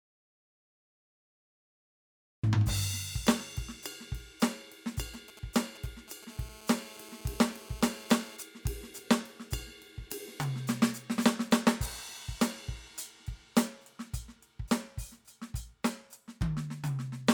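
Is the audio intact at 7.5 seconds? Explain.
No. A GSM phone buzz runs from 6.30 to 8.37 s, covering 7.5 s. A nearby 2G handset on a call transmits in bursts about 217 times a second, and the audio circuitry rectifies those radio pulses into the signal path. The result is a hard, raspy buzz at 217 Hz, rich in harmonics, sitting about 20 dB below the music and holding nearly steady, with no relation to what is playing.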